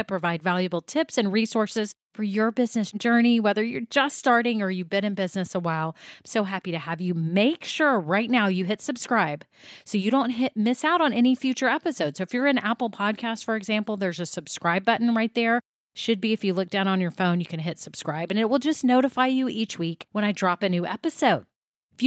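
No technical faults are audible.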